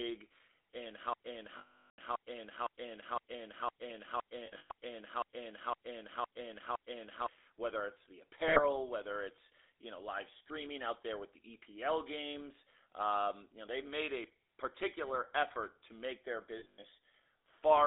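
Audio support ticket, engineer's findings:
Buzzy, gravelly roughness across the whole clip; band limited to about 300 Hz to 3.7 kHz. GSM full-rate codec on the path, consistent with 13 kbps coding: pulse-driven vocal-tract model discards fine excitation detail, leaving speech coarse and edgy throughout.

Stuck repeat from 1.13 s to 7.26 s: a 511 ms slice plays back to back 12 times, then speech resumes at "whether it's the". Broken-record loop; stalled player or stream likely kept re-sending its last buffered fragment. Intended audio in that span is gone.

Metallic, rough held ring at 1.58 to 2.00 s, 400 ms, cut to silence; 4.46 to 4.71 s, 200 ms in patches over 240 ms, longest run about a tenth of a second; 8.48 to 8.60 s, 80 ms, between "whether it's the" and "whether it's you know"; 16.58 to 16.84 s, 180 ms scattered over 240 ms, after "effort to make their". Lost GSM frames: decoder repeated the last good frame's parameters.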